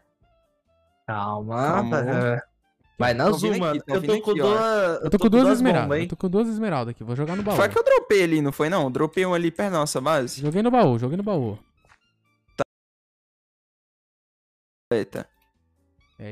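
At 12.63 s the sound cuts off abruptly in mid-flow and drops into dead silence, with not even room tone left beneath it, until it snaps back at 14.92 s. This is an audio dropout to silence lasting about 2.29 s, and whatever happened during that stretch is simply gone. The likely cause is the input being lost for a moment, through a disconnected device, a broken link or an accidental mute, while recording carried on writing silence.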